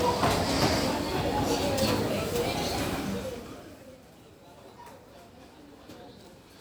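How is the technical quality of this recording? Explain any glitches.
Nothing in this recording of everyday sounds stood out as a technical problem on listening.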